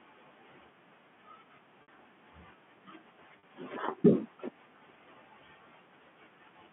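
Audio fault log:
1.82–1.88 s and 3.39–3.43 s: packet loss with pitch repetition. Gaps of 60 ms and 40 ms were bridged by repeating the last pitch period, so the sound briefly holds with a buzzy, flat tone. The waveform shows identical repeating cycles shrinking in level, and the spectrogram shows frozen, perfectly level harmonic stripes within the 150 Hz to 3.4 kHz telephone band.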